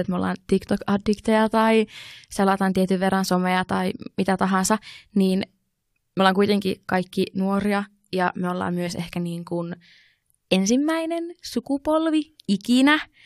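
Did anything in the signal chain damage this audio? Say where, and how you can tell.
Yes, at the codec stage: compressed frames skipped. At 6.19 s the speech jumps ahead by about 50 ms, and from 8.86 to 8.88 s by about 20 ms. At each join whole frames were left out, so the audio jumps ahead by their length.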